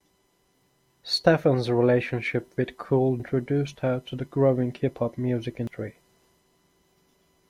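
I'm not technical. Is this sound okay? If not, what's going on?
No. There is damaged data in the compressed stream: in two spots, bits of the stored recording were corrupted. When the player reaches a damaged patch, it can't read that piece properly and has to hunt for the next clean section. You hear that as a brief chirp or blip in the speech, once at 3.20 seconds, just before "her to the growing", and again at 5.67 seconds, right after "hop music".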